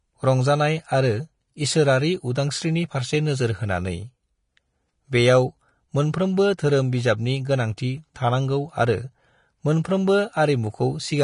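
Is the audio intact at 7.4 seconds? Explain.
No. Vorbis compression, likely the cause, runs throughout: treble is coarsely quantised into grainy hiss below a 10.5 kHz cut-off, fitting roughly 34 kbps. A plain low-pass would stay clean rather than grainy.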